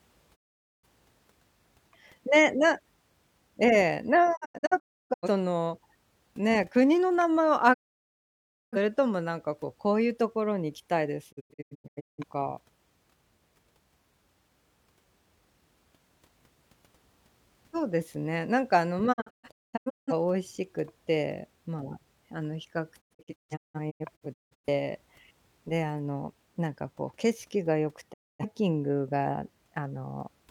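Speech with repeated digital broadcast dropout at 0.34–0.86, 4.35–5.28, 7.72–8.77, 11.31–12.24, 19.12–20.13, 23.00–24.68 and 28.12–28.45 s. The receiver mutes bad frames with 20 ms fades, leaving flat-line gaps and blank spectrogram columns, single holes or scattered clusters, in steps fitting roughly 43 ms frames.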